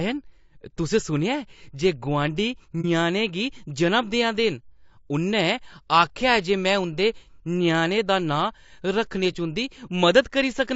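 The whole recording sounds rough and grainy, with a hiss-like texture filling the gaps between the harmonics and a thin, artificial top end. This is likely low-delay AAC compression, the AAC-ELD style used for calls, whose short frames blur harmonic detail at a rate that fits around 32 kbps.

Just after "जे गुआंढी", from 2.81 to 2.85 s, the sound briefly dips, and the same happens again from 9.32 to 9.36 s. Both are AAC frame loss with muting: about 30 ms of coded audio was missing each time, the decoder substituted silence, and the overlapping windows smoothed the edges.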